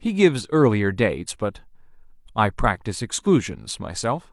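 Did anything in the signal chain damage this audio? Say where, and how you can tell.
No, nothing I can hear in this speech suggests any stage of the chain left a mark on it, so there's nothing to trace back.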